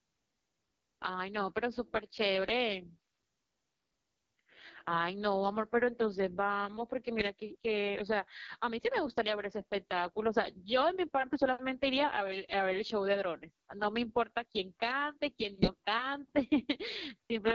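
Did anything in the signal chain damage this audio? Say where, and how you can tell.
Yes. The damage is at the codec stage: an AMR wideband (HD Voice) codec runs throughout the speech. It sounds rough and raspy from start to end, which fits its lowest 6.6 kbit/s mode. The pulse-driven vocal tract model has too few bits, so fine detail breaks up.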